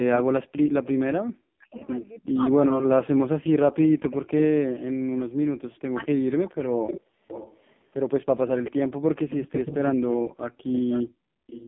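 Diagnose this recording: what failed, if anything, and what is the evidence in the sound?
Codec stage: the whole clip carries AMR narrowband mobile codec damage at 5.15 kbps. The line band runs from 150 Hz to 3.5 kHz, and nothing passes above 3.5 kHz. At this low rate the vocal-tract model gets very few pulses per subframe, so the voice sounds buzzy and synthetic. On a spectrogram you would see a hard ceiling at 3.5 kHz, an empty strip below 150 Hz, and smeared, blocky harmonics at 20 ms frame spacing.

Call processing: there is echo leak, a delayed copy of the speech arriving about 402 ms behind the original. It is most likely a loudspeaker-side echo canceller failing to remove what its microphone picked up. It appears at 0.16–0.22 s (loud, about 5 dB under the speech), at 0.83–1.87 s (about 20 dB under), briefly at 4.1–4.17 s and 5.99–6.06 s (about 15 dB under), and continuously from 6.87 s to the end (about 10 dB under). 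A spectrogram shows duplicate formant patterns trailing the speech by 0.4 s.

Call processing: there is also speech suppressed in double talk, at 2.3–2.41 s and across 3.11–6.59 s. The likely cause is the echo canceller mistaking the talker for loudspeaker echo while both sides spoke, and ducking the signal by as much as about 40 dB. It affects roughly 0.1 s in the first stretch and around 2 s in total in the second. The voice dips and drops out in pieces. On the waveform the envelope collapses to near silence in chunks, and the spectrogram shows matching vertical gaps mid-phrase.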